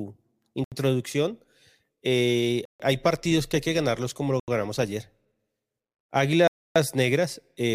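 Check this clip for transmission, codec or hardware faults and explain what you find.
Four dropouts in the speech point to a likely Bluetooth stall. Silence falls at 0.64 s (75 ms), 2.65 s (144 ms, before "hay partidos que hay"), 4.40 s (81 ms, between "que ganarlos como lo" and "ganamos ayer") and 6.47 s (282 ms). Delayed packets drained the receiver's buffer, so playback halted until retransmissions arrived.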